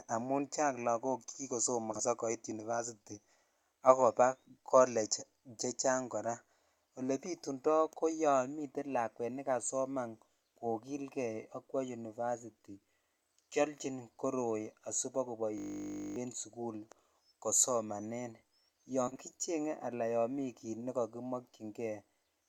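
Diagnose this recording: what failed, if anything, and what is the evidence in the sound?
Frames out of order, at the network or packet-delivery stage. Two neighbouring runs of coded audio arrived swapped and were decoded in that order. At 1.91 to 2.01 s, and again at 19.07 to 19.20 s just before "kicheng ala", a short stretch plays with its halves exchanged. Each displaced block lasts about 40 ms, which fits two frames apiece. The result is a garbled flutter, but the timeline stays intact and no time is lost.

System hang loop, at the driver or buffer stage. The computer or its audio driver stalled while the sound hardware kept replaying the same ring buffer. From 15.58 to 16.16 s, just before "en sukul", one 20 ms slice repeats 29 times, producing a steady buzz at 50 Hz rather than a stutter. The loop length points to a buffer of about 20 ms. When output resumes, about half a second of real audio is missing.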